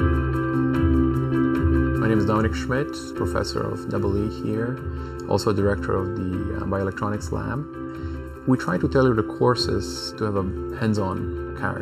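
Channel delay (comb filtering) runs through the whole sound: one channel arrives under a millisecond late and is summed to mono, cutting fixed notches near 700 Hz and about every 1.4 kHz above. The notches never sweep like a flanger's, leaving a steady hollow, phasey colour.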